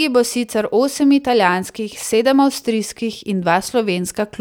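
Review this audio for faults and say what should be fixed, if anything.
No faults; nothing to fix.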